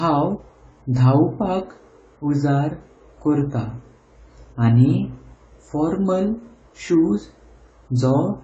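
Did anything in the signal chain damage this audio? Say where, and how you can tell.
Yes: AAC compression throughout, at the codec stage. Nothing survives above 8.8 kHz, and the speech sounds dull with fizzy, smeared sibilants. This is likely low-bitrate AAC-LC, around 24 kbps, cutting the top band and coarsely quantising the rest.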